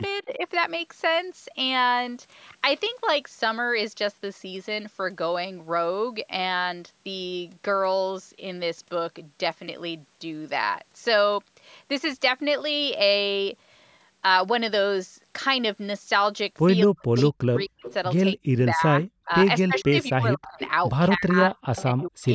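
At 0.25 to 0.44 s, both ends of the call were likely talking at once, and the echo canceller could not tell the near talker from loudspeaker echo. The result is speech suppressed in double talk. The voice dips by about 10 dB for roughly 150 ms. The same fault returns more severely from 16.86 to 20.6 s. Drops reach about 40 dB and roughly two seconds in total are cut away.

Within that stretch, one side's echo canceller likely failed to remove all of its loudspeaker pickup, producing echo leak. A delayed copy of the voice, 258 to 261 ms behind, comes back at 17.17 to 17.22 s and 17.84 to 17.94 s as brief scraps about 10 and 15 dB below the speech. From 19.77 to 20.7 s it returns as a longer stretch about 15 dB down.

Near the end, speech suppressed in double talk likely strikes again from 21.17 to 22.22 s, cutting roughly 700 ms with drops of about 40 dB. Overlapping it, from 21.76 to 22.28 s, the echo leak likely returns at a 263 ms delay, around 20 dB below the speech. 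The call's microphone processing also band-limits everything to nothing above 8 kHz.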